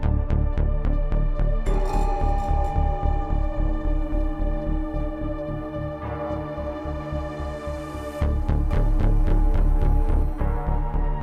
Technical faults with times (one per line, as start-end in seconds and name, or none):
8.71-10.23 doubled audio track